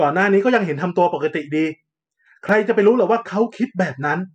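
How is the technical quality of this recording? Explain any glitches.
One glitch stands out, a brief dropout in the speech. At 2.49 s there is a block of digital silence: most likely the output buffer wasn't filled in time, so about 1.3 ms was zeroed, which fits a 64-sample block. The abrupt cut to silence and back gives a single sharp tick.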